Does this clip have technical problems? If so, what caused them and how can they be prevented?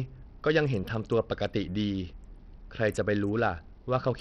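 Yes. Heavy Bluetooth SBC compression damage runs through the whole speech clip. The treble thins out and flickers, and a gritty, aliased noise rides on the sound. The likely cause is a starved SBC bit pool, which fits a link near 64 kbps. To prevent it, record over a wired path or a higher-bitrate Bluetooth codec.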